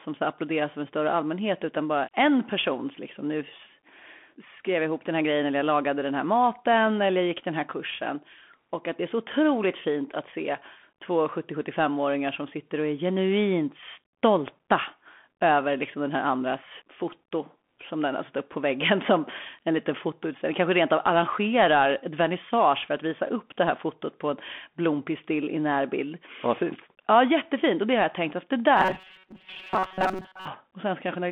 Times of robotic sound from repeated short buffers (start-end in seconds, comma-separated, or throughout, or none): 28.77-30.48